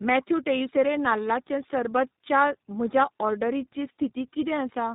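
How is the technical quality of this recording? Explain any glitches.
The technical quality is poor. The speech has passed through more than one low-rate speech coder. Throughout the clip there is tandem speech coding, with nothing above about 3.8 kHz. The sound points to a GSM-type coder followed, after a plain telephone-grade link, by an iLBC-type coder. Each coder re-encodes the previous one's already damaged output, so the errors stack. The result is rough, muffled and warbly. A single coder or simple band-limiting alone would be cleaner than this compounded roughness.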